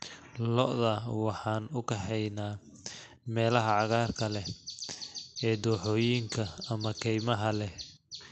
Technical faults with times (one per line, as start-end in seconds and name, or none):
0.00-8.32 clock drift between sender and receiver
0.46-8.31 repeated timing corrections